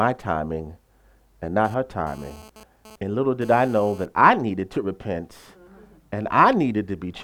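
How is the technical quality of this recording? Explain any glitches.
The recording has one fault, GSM phone buzz, from 1.65 s to 4.06 s. A nearby 2G phone exchanging data transmits in bursts at 217 Hz. The audio circuitry rectifies those radio pulses into a hard, raspy, harmonic-rich buzz about 24 dB below the speech, unrelated to it and intermittent.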